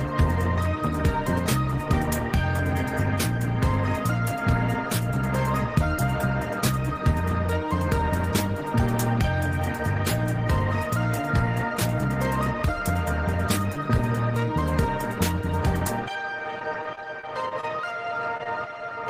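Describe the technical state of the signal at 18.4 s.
Right around there you get two bits of short concealed packet loss, 18.37 to 18.41 s and 18.43 to 18.47 s. Each time about 20 ms arrived too late, so the decoder patched it by extending the preceding sound and crossfading back, which leaves a quick smeary wobble.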